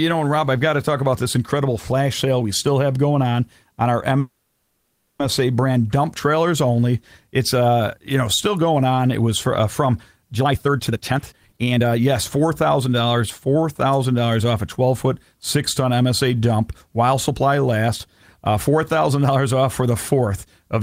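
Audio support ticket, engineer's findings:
Call audio freeze, 4.19 to 5.21 s. After "going on on our", the last sound is held and stretched into a fading buzz or hiss fill for about 1 s, with no drop to silence. Speech resumes at "brand dump trailers" with nothing lost. Likely cause: delayed packets draining the jitter buffer. The gap pushes everything after it about 1 s later.

Jitter buffer speed-up, 10.40 to 13.86 s. Between "was for uh from" and "dollars off a twelve", speech runs hurried at about 129% speed while pitch stays unchanged. The receiver's jitter buffer overfilled, so it trimmed many short pitch-period slices back to back. Roughly a second of audio is removed.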